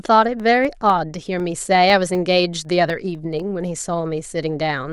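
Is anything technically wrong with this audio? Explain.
Yes. Periodic USB or driver dropouts run from 0.40 s to 3.40 s, one every 0.25 s, about fifteen in all. Each time, something on the computer stalls the USB bus or the audio driver on a fixed schedule, and roughly a millisecond of speech is lost and replaced with silence. These tiny evenly spaced gaps cut into the waveform, so the speech carries a steady ticking that is heard only where there is signal to interrupt.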